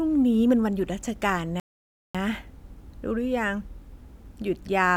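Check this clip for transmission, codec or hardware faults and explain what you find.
One transmission fault is present. A rebuffering stall at 1.60 to 2.15 s: the player's downloaded audio ran dry, so playback halts for 0.55 s of silence, then the speech resumes exactly where it stopped, with nothing lost.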